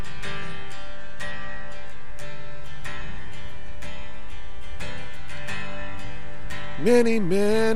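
DC offset runs through the whole clip, from the first sample to the last, with the waveform sitting displaced from zero by a constant amount of about -20 dBFS. It is not heard as a sound in itself; instead it appears as steady energy at 0 Hz at the bottom of the spectrum. Because the signal is centred off zero, peaks in one direction reach full scale sooner, so part of the available headroom is lost to the offset.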